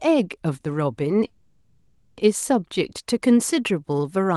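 A call audio freeze runs from 1.26 to 2.18 s: the last sound is stretched into a fading buzz for about 0.9 s, likely because packets stalled and the jitter buffer emptied. The speech then resumes where it stopped, delayed rather than lost.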